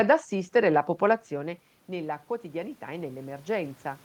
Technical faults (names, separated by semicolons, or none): automatic gain rising